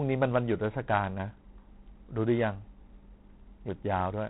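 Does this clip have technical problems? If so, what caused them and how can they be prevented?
Yes. Throughout, the speech carries a harsh, rasping hiss that rises and falls with its level, and nothing above 3.9 kHz remains. This is G.726 ADPCM damage, consistent with 24 kbit/s. Too few bits describe each sample's difference from the predicted value. Use G.726 at 32 kbit/s or a wideband codec.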